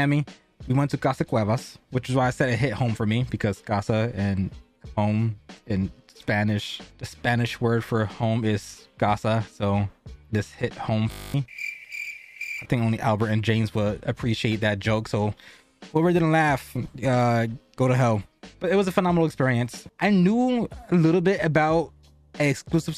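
At 11.12 s the sound locks into a steady 50 Hz buzz lasting until 11.34 s: a system hang loop, where the system stalled and the hardware replayed one 20 ms slice of its buffer eleven times, losing about a fifth of a second of audio.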